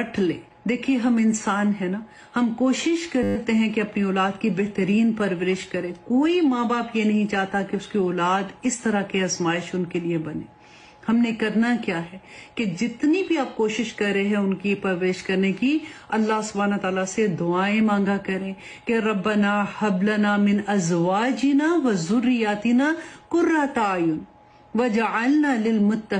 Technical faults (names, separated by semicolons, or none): system hang loop